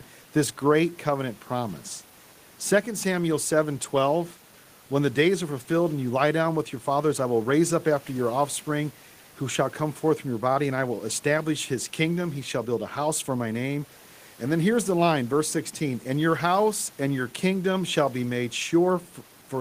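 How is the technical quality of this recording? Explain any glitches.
Nothing stood out on listening to this speech recording, with only the room's own background noise audible at about 30 dB below the speech.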